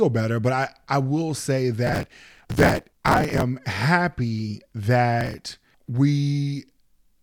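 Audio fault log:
1.87–3.42 s and 5.21–5.68 s, processor overload crackle: a gritty, tearing crackle rides on the speech, first right after "I I will say". The processor kept missing deadlines for tiny buffers of about 3 ms, and each missed buffer was skipped, leaving hard-edged gaps that fuse into crackle.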